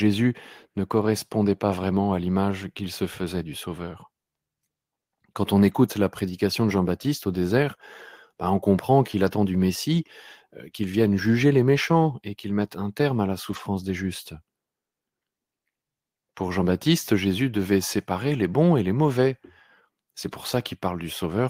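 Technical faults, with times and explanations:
3.21–3.23 s, 5.67–5.77 s, 13.47–13.57 s and 20.33–20.35 s, lost packet rebuilt from error correction: packets went missing, and the decoder filled each hole from the low-bitrate backup copy carried in the following packet, so the speech never drops out. Instead, short stretches turn rougher and noisier: 20 ms after "à l'image qu'il se", 60 ms just before "la prédication de", 60 ms between "un terme à la" and "des justes", and 20 ms near the end.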